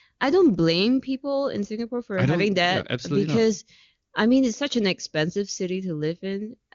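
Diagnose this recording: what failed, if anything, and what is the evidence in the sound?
Nothing failed in this recording.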